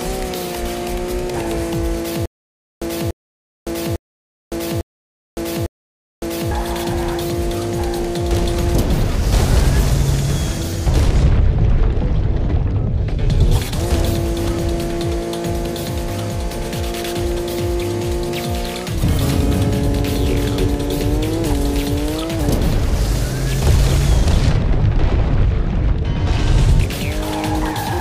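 From 2.26 s to 6.51 s there is a stutter with silent gaps. A 291 ms fragment repeats five times every 851 ms, with 560 ms of digital silence between. Likely cause: a stalled stream replaying its last fragment at each retry, losing the audio in between.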